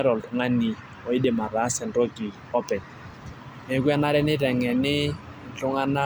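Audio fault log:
No audible faults were found in this speech recording.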